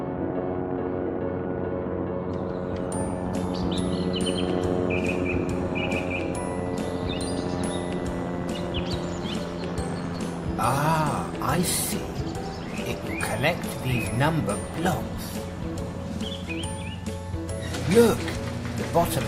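DAB burbling appears from 0.86 to 0.94 s, a brief burst of noisy blips over the audio. Bit errors at a rate of around half a percent slipped past error correction, corrupting MP2 samples so single sub-bands get short blips of noise, consistent with roughly six damaged frames.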